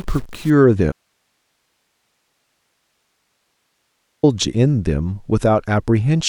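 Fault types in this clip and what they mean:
Stuck bit: From 0 to 0.5 s one data bit is likely held fixed, pushing many samples off by its weight.
Audio dropout to a faint residue: At 0.92 s the speech cuts out abruptly for 3.31 s. Only hiss remains, about 55 dB down, likely from a lost signal feeding a live path.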